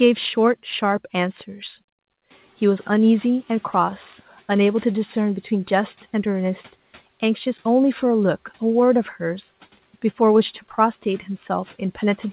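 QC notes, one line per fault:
2.3–5.3 s, noise suppressor catching up: the room noise jumps by about 15 dB around two and a half seconds in, and the suppressor's estimate trails it. The noise comes through with less reduction at first, then sinks by about 8 dB as the estimate adapts over 3 s.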